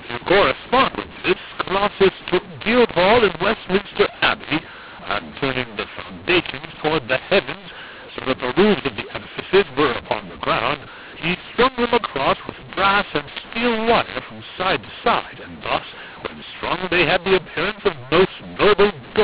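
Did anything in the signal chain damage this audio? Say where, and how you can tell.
Yes. The fault is at the codec decoder: a mu-law and A-law mix-up, throughout. Speech coded as mu-law is decoded as A-law. Each 8-bit code maps to the wrong level. Speech turns harsh and distorted. Quiet samples rise above silence, so pauses fill with noise.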